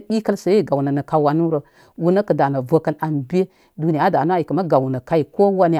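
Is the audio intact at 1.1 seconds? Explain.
Yes, at 1.1 seconds the speech plays through intact, with no audible fault at that moment.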